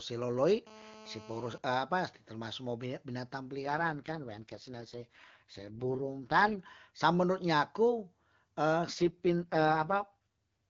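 From 0.67 to 1.58 s a GSM phone buzz sits under the speech: a nearby handset in a call bursts about 217 times a second, and the circuitry rectifies those pulses into a hard, raspy buzz about 21 dB below the signal. A spectrogram shows an evenly spaced comb of harmonics from 217 Hz upward; the waveform carries a regular pulse train.

From 3.64 to 6.60 s, and again from 8.93 s to the end, an AMR rate drop turns the speech rough and synthetic. The sound points to the codec stepping down from 23.85 to 6.6 kbit/s, with the bandwidth unchanged and no gaps. On a spectrogram, harmonics blur and fragment while the band edge stays put.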